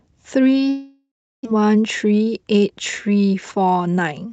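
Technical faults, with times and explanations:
0.69–1.47 s, long network dropout: the speech breaks off and the last sound is stretched into a fading buzz, sinking after a few tenths of a second into about 0.32 s of near silence before speech resumes with roughly 0.6 s simply gone. The likely cause is a stall in packet arrival, with the receiver concealing the gap. On a spectrogram, smeared harmonics thin to an empty band; the waveform shows a decaying envelope, then a flat line.
1.55–2.71 s, jitter buffer speed-up: once packets catch up, the buffer holds about 150 ms more than its target, so the receiver trims short pitch-period slices again and again. The speech runs about 11% faster at unchanged pitch and sounds hurried. On a spectrogram, harmonic spacing stays the same while syllables are compressed in time. The waveform shows shortened voiced segments with tiny splice points between periods.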